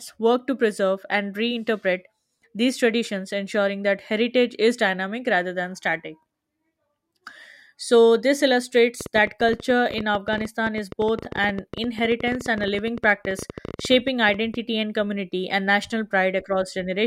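From 9.01 to 14.55 s, a train of clicks rides over the speech, ending just before "and community and national". About thirteen similar pulses per second arrive at an uneven pace, roughly seventy in all, peaking a few decibels above the speech and ticking on through the pauses. That separates it from random crackle or from dropouts, which would remove sound rather than add it. Sustained, repeated injection like this is likely interference or a faulty connection.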